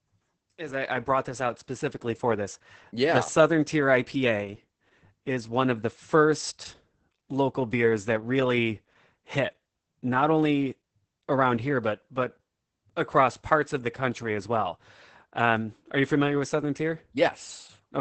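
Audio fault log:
Throughout: Opus voice compression. The speech has almost nothing above 8.6 kHz and sounds muffled, hoarse and slightly robotic. The wideband limit and the roughness fit SILK linear-prediction coding at a very low bitrate, around 10 kbps, with 20 ms frames. At that rate the excitation signal is quantised coarsely, so the fine structure of the voice gives way to a buzzy, synthetic texture, and the damage is heavy.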